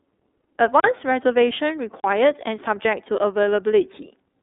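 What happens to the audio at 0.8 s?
At 0.80 s a block of digital silence cuts in and lasts until 0.84 s, a 40 ms gap of silence. The speech stops dead and resumes with no fade, leaving a short, audible hole.

The same moment also carries the iLBC codec that runs through the whole clip. It codes each 30 ms frame independently at 13.33 kbps, passing only about 300 Hz to 3.7 kHz with nothing above 3.8 kHz, which leaves the speech plainly muffled, rough and slightly synthetic.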